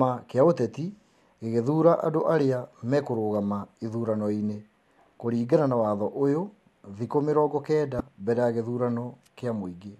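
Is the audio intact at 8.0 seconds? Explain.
No. At 7.97 to 8.00 s, the speech breaks for about 34 ms with damaged data in the compressed stream. Corrupted bytes make the decoder misread those frames and lose sync while it hunts for the next valid frame header. The result is a brief chirp or blip.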